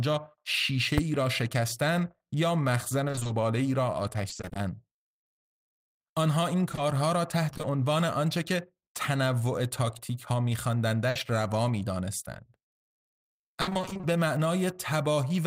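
The clip is speech with three kinds of fault. At 0.98 s there is invalid numbers at full scale: a calculation returned infinite or invalid values, and for a block of about 5 ms the output is pinned at one extreme, far beyond the speech peaks. Because the block is so short, it is heard as a single bang rather than a pop-silence-pop pair. A click or dropout would stay near the audio's level instead.

Repeated packet loss (robotic sound) affects three stretches. From 3.07 to 4.57 s there are 13 holes totalling 260 ms, about 17% of the span. From 6.71 to 7.65 s there are 5 holes totalling 100 ms, about 11%. From 13.61 to 14.05 s there are 10 holes totalling 240 ms, about 55%. Each hole is patched by extending the last sound, and the next follows soon after, so the speech turns choppy with pieces missing. The 20 ms longest gaps in the first two stretches fit 20 ms packets. The third stretch is the densest, with gaps up to 60 ms. 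What separates this from a single burst is the quick recurrence of short patches.

A burst of packet loss sits at 11.09 to 11.17 s. A single 60 ms gap was filled by continuing the last sound while turning it down, and the speech resumes with 60 ms missing. It is one isolated hole rather than a run of them.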